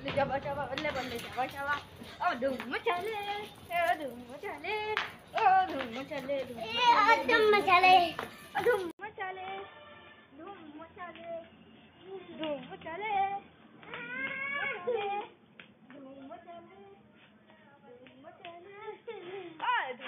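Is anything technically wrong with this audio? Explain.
Yes. From 8.91 s, after an 80 ms gap, the input likely switched to a poorer device. Its narrower band cuts everything above 3.5 kHz. The sound turns dull, quieter and faintly noisy.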